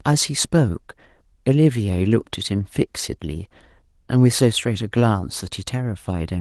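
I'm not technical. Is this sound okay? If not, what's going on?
Yes, this one's fine: there's nothing wrong with it that needs fixing.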